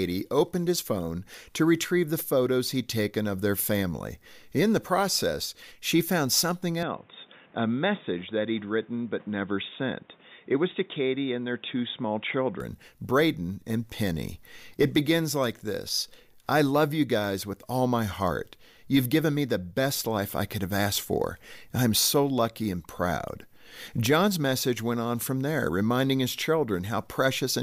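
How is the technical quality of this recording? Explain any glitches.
One fault mars the recording. From 6.83 to 12.60 s the speech turns dull and boxy, likely an input switched to a poorer device: nothing passes above 3.8 kHz, the level falls slightly, and faint new noise appears. A spectrogram shows the upper band cut flat; the waveform shrinks, with no gap at either switch.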